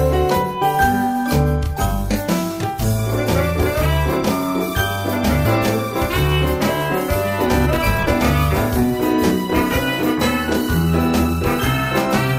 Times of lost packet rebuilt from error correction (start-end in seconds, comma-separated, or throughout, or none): none